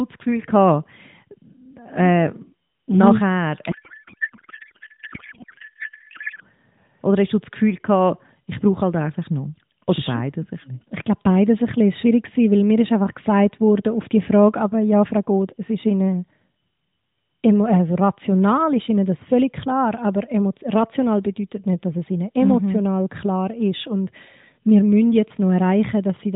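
From 3.72 to 6.44 s, a codec payload misread occurs. The receiver unpacks octet-aligned AMR frames as if they used the bandwidth-efficient layout. The octet-aligned format pads its header fields out to byte boundaries, so reading it the other way shifts every field. The decoder then builds speech from misplaced codebook and pitch values. The speech gives way to garbled noise and warble that barely follows it, until both ends agree on the format again. Around this, the narrowband AMR path carries the speech with light codec colouring and nothing above 4 kHz, which fits a 12.2 kbps mode.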